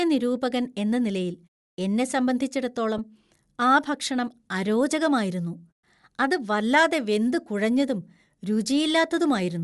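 Throughout the speech, the upper spectrum has a grainy, breathy texture. Sibilants and the top octave sound noise-filled rather than detailed. This is codec damage that is plainly audible, and it is likely Bluetooth LC3 compression. At lowish rates the transform coder discards much of the high-frequency content and fills the gaps with synthetic noise. The degree of damage fits a bitrate near 48 kbps with short 7.5 ms frames.

At about 2.98 s there is a brief patch of lost LE Audio frames, roughly 15 ms long, which fits two consecutive 7.5 ms frames going missing. The decoder conceals the gap by repeating the previous spectrum with randomised signs. The result is a short noisy smear in place of the real signal. The gap is too short for the concealment to fade toward silence.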